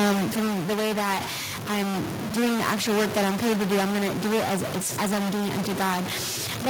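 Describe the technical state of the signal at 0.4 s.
At 0.4 s the speech is sinking in level. Automatic gain falling runs from 0.05 to 0.91 s. The gain control judged the input too loud, or its background noise too strong, and eased its gain down by about 4 dB. Voice and background drop together before "that I'm doing the".

A stuck bit is also present here, as it is throughout the clip. Pauses fill with noise. This is likely one converter bit held at a fixed value, so about half the samples are off by that bit's weight.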